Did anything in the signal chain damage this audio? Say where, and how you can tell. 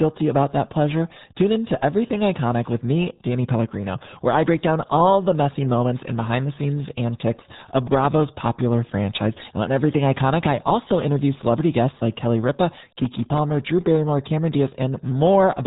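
Yes. At the codec stage, the RealAudio 14.4 codec runs at 8 kbit/s. Nothing passes above 3.8 kHz. The speech sounds muffled and gargly throughout.

At the driver or buffer stage, processor overload crackle tears through 7.45 to 8.24 s, between "and behind the scenes" and "popular franchise". About twenty tiny buffers, each under a millisecond, missed their deadlines and replayed old audio.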